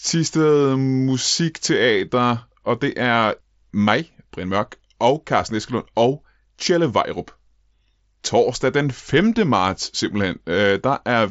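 No technical faults are audible.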